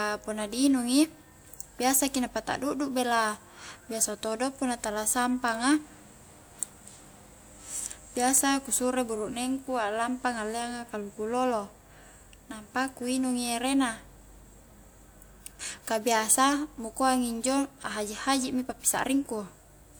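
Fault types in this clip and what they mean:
Dropped samples: three isolated sharp clicks in the speech, each a thin vertical line across the spectrum: at 0.73 s just after "punna di", at 8.38 s just before "ku suro", and at 9.36 s between "ku suro" and "aklampa ngalleanga kaluku lolo". Each is likely caused by a handful of samples, well under a millisecond's worth, missing from the stream. The waveform then jumps straight to a later value, which makes the click without removing any audible sound.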